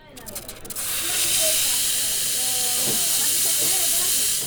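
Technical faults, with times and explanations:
No technical faults can be heard in this audio.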